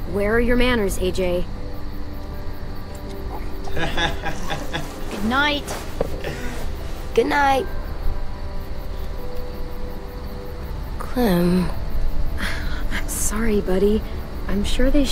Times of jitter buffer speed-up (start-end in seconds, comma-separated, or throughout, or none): none